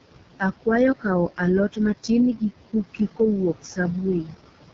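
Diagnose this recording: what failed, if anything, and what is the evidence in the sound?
Background noise sinks by about 18 dB between phrases and rises back under the speech. These are noise suppressor artifacts from call processing, which attenuates bands it judges to be steady noise.

Throughout, the speech sounds rough and raspy, with nothing above 7.4 kHz. This is heavy AMR wideband (HD Voice) codec damage, consistent with its lowest 6.6 kbit/s mode.

Speech dips by up to about 15 dB at 2.94–3.2 s and about 10 dB at 4.23–4.35 s, each losing roughly a tenth of a second. This is speech cut by the noise suppressor, which mistook those parts of the speech for the room noise.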